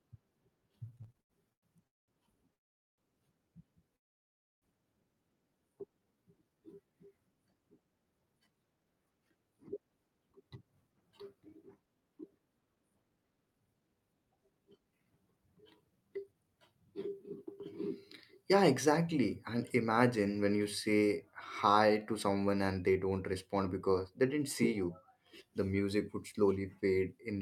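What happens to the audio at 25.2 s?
Nothing goes wrong at 25.2 s; the speech there runs on intact, with no dropout, click, distortion or other fault at that moment.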